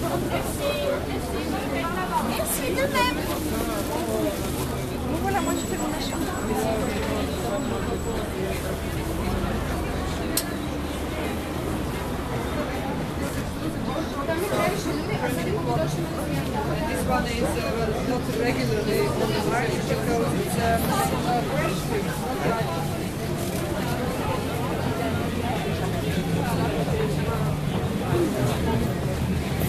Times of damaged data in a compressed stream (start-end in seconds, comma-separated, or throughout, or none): 21.48